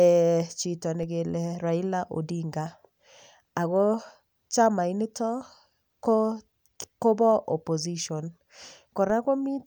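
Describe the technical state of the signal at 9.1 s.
At 9.10 s the zero line of the speech jumps in a DC step of about -34 dBFS. It is heard as a brief low thump. The offset then decays away through a 20 Hz high-pass.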